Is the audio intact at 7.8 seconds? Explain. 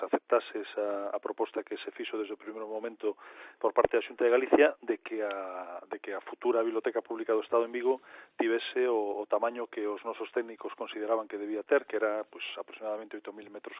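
Yes, the audio is intact at 7.8 seconds, with nothing audibly wrong at that moment.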